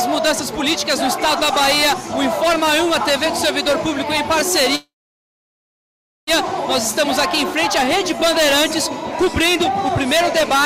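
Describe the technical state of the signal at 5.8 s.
At 5.8 s the signal sits inside a call audio freeze running from 4.75 to 6.30 s. The sound breaks off, the last fragment carries on briefly as a fading buzz, then about 1.38 s of silence follows. Audio resumes exactly where it stopped, so nothing is lost and the stream ends up about 1.52 s later. The likely cause is delayed packets draining the jitter buffer. A dropout would remove sound, but this freeze only inserts a pause.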